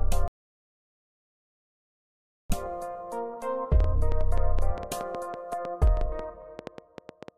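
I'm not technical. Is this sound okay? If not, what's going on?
No. There is an audio dropout to silence from 0.28 to 2.50 s. For about 2.2 seconds the sound vanishes completely, not even faint background hiss remains, and then it comes back abruptly. That total silence means the input itself was cut off, most likely a loose cable, a lost connection or an accidental mute, while the recorder kept running and saved nothing but blank audio. Whatever happened during that gap can't be recovered.

Then a train of clicks runs from 3.80 to 7.29 s: about twenty similar ticks or pops, roughly six or seven per second, arriving at an uneven pace. They sit on top of the sound and are loud enough to stand out clearly, even in quieter moments. A repeating pattern like this suggests something kept injecting short bursts of noise into the signal, likely electrical interference from nearby equipment or a faulty connection or power supply.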